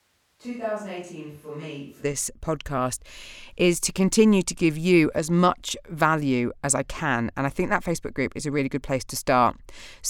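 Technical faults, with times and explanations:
0.00 to 2.02 s, switch to a distant microphone: the speech is already roomy and hollow when the clip begins, thin in the bass and roughly 10 dB quieter, with background noise only around 35 dB below the speech. At 2.02 s it snaps back to a close, full sound. The likely cause is the close microphone's signal dropping out in favour of one further away. Unlike added reverb or a low-cut filter, tone, level and noise floor all change together, and the change is abrupt.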